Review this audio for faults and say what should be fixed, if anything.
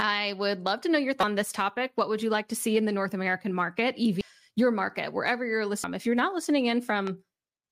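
Damaged data in a compressed stream shows up three times in the speech: a brief glitch from 1.20 to 1.24 s, and shorter blips at 4.21 s and 5.84 s. The decoder hit corrupted frames, misread them, lost sync and resumed at the next valid frame header. A click from clipping or a dropout has a different cause; this comes from the decoder losing sync on bad data. Deliver the file over a checksummed transfer and verify it before decoding.

A loud pop occurs from 7.07 to 7.09 s, a single sharp transient peaking at about 10 dB above the speech, which carries on underneath it. It is likely from an electrical step such as a plug, switch or static discharge, shaped briefly by the downstream circuitry. Unlike the stream damage, it is a pressure-like thump added on top of the sound, with no chirp and no skip in the audio. Secure connections and ground the equipment before recording.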